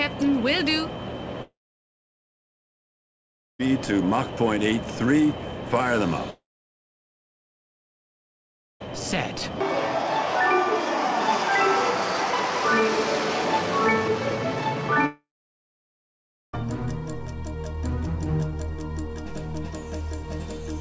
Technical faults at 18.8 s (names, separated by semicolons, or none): none